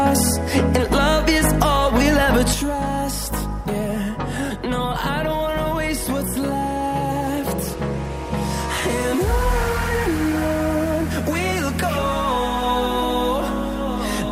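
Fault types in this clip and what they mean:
One channel drops out: from 2.54 s to the end, the sound falls abruptly by about 6 dB, likely from losing one stereo channel before mono summing.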